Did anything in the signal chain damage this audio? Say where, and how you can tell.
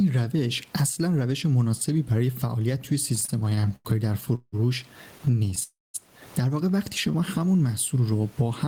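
Yes. Gain pumping at capture: throughout, the gain swings by around 15 dB as loud speech pulls it down. Likely cause is excessive input gain hitting a fast limiter.

Repeated stalls (stutter) at the network and jitter buffer: from 3.15 to 4.54 s, fifteen gaps up to 173 ms were filled. More brief stalls follow from 5.18 to 5.63 s.

Call audio freeze at the network: at 5.63 s sound extends, then fades to near silence for about 200 ms. It resumes at 5.96 s, likely from packets held in transit.

Jitter buffer slow-down in the receiver: from 7.07 to 7.40 s, repeated pitch periods add 36 ms. Speech runs at 92% speed, same pitch, slightly drawn out.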